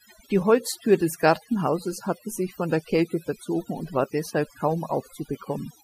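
From start to finish, a noise reduction stage has been pushed far too hard, which is overdone noise removal. It treats any frequency band sitting close to its noise estimate as unwanted and drives it down or off, so the quieter parts of the speech are stripped out along with the noise. Between phrases the background falls to near silence dotted with twinkling specks.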